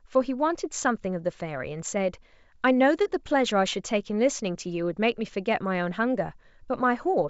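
Nothing is technically wrong with this speech recording. It has passed through G.722 wideband telephone coding at 64 kbit/s, which keeps the speech bandwidth up to about 7 kHz, and any coding damage is faint at most.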